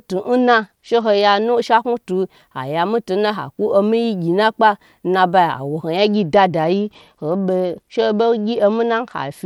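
From 0.39 to 1.44 s and again from 5.97 s to the end, a Bluetooth SBC bit pool drop dulls the treble and adds gritty noise, consistent with a bit pool falling from 28 to 11, near 90 kbps. Unlike packet loss, nothing drops out.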